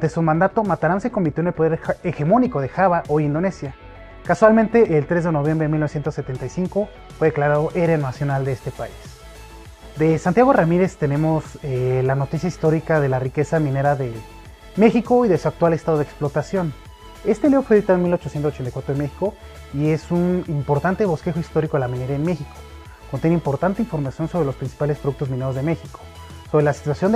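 Nothing is technically wrong with this audio; there are no faults to report at any time.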